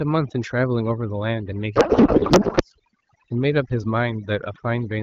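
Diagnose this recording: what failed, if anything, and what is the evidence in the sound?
Noise suppression in the call processing chain was set far too aggressively. Throughout the clip, frequency bands sitting near the suppressor's noise estimate are pulled down or gated off entirely. The background collapses into near silence with twinkling specks of residue. The quieter components of the speech are removed along with the noise. This is overdone noise removal, and it runs from start to finish.

At the codec stage, from 1.76 to 2.63 s, a codec payload misread occurs between sender and receiver. They disagree on how the AMR bits are packed, and the sound points to octet-aligned frames being parsed as bandwidth-efficient ones. The decoder accepts the frames as valid but pulls its fields from the wrong bit positions. For that stretch the speech is replaced by garbled noise and warble that barely tracks it, until the packing agrees again.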